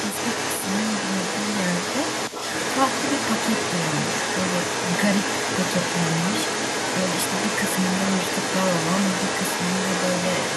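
Throughout the whole clip, the other side's voice leaks through. A second voice sits at roughly the main talker's level. It likely comes from a loudspeaker whose sound the echo canceller failed to remove from the microphone signal.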